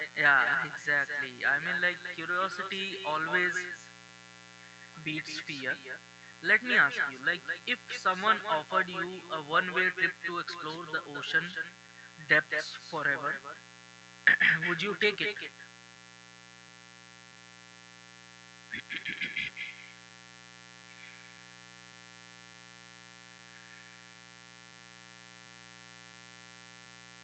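Mains buzz runs through the whole of this speech recording, a steady raspy drone built on 60 Hz whose harmonics climb well into the kilohertz range, sitting roughly 20 dB below the speech. The rasp comes from sharp switching spikes, of the kind a dimmer, rectifier or poorly shielded cable lets in, landing twice per mains cycle and spraying energy across many multiples of 60 Hz rather than producing a clean low hum.

Echo with no canceller is also present from start to finish: every phrase is trailed, about a fifth of a second later, by a copy about 8 dB quieter that sounds thinner. The far end is playing the call through a loudspeaker, its microphone is catching that playback, and nothing on that side is subtracting it before it travels back across the network to the talker.

Clock drift between sender and receiver affects the entire clip, with the sending device's audio clock running slow by something like one and a half percent. 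Because samples arrive slightly more slowly than the receiver consumes them, its jitter buffer keeps drifting towards empty and has to be topped up again and again rather than settling at a steady fill level.

Repeated timing corrections are the audible result, spread from 0.03 s to 26.86 s. The receiver repeatedly stretches the stream by duplicating short slices, running it at 99% speed overall and adding about 400 ms in total. Each insertion is tiny and they are unevenly spaced, so they come across as faint hiccups and a slightly unsteady pace in the speech. The speech band itself stops at about 8 kHz, which fits a wideband call codec.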